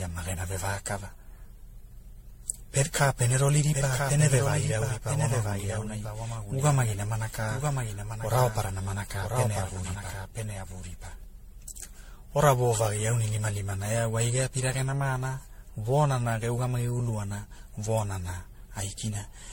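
The whole clip has a swirly, hollow, smeared quality that goes beyond what a single low-bitrate encode would give you, and consonant attacks come out blurred. There's also nothing above 16.5 kHz. That points to generation loss, likely from the audio being run through something like a 64 kbit/s MP3 encode-decode cycle many times over. Each pass requantises on a shifted frame grid, so the noise and spectral holes keep piling up.

From 3.04 s to 11.24 s there's a second copy of the speech running about a second behind and a few dB quieter. It's full-band with no reverb tail or room colour, and it cuts in and out abruptly at those two points. That's a doubled audio track, likely caused by the same audio being picked up again through a slower path, or an edit leaving two out-of-step copies layered together.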